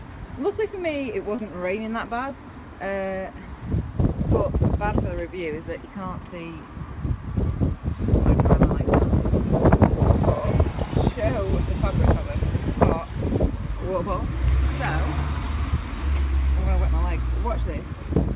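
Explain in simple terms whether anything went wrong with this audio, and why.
Short concealed packet loss at 1.36 s: about 20 ms of the call arrived too late to be played. The receiver filled the gap by continuing the sound just before it, then blended back into the real audio. You hear a tiny smear or wobble.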